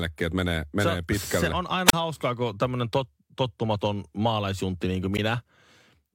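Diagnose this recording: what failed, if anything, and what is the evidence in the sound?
A wireless microphone squelch dropout in the analogue radio link: at 1.88–1.93 s, just before "hauskaa kun tämmöinen tot", and 5.14–5.19 s, after "tottumaton maalaisjuntti niin kuin", the RF signal fades, hiss rises, then squelch mutes the speech for about 33 ms and 14 ms. That rising static, unlike clean network packet-loss gaps, marks it.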